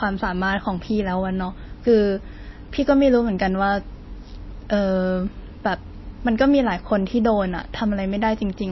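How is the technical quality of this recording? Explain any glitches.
The quality is poor, with plainly audible codec damage across the whole speech clip, most likely MP3 compression. Nothing sounds above about 5.8 kHz, and the remaining detail turns watery and swirly, with chirpy sibilants and blurred onsets. Short on bits, which fits a very low bitrate near 24 kbps, the encoder discards treble and lets weak frequency lines flicker on and off between frames. That flickering separates it from a simple low-pass filter, which dulls the sound without adding swirl.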